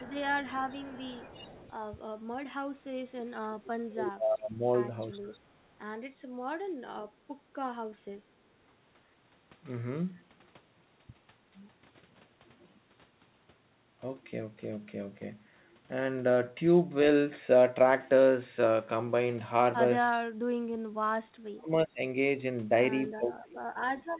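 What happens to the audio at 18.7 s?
At 18.7 s the speech comes through intact, with no fault at that point, just the narrow telephone-band sound of the G.711 call path, which leaves nothing above 4 kHz.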